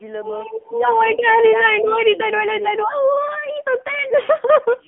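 Speech heard through the AMR narrowband mobile codec throughout: a buzzy, synthetic, phone-line voice. A spectrogram shows a 250 Hz to 3.4 kHz band with nothing above 3.4 kHz, which fits a narrowband phone line; the codec runs at 7.4 kbps.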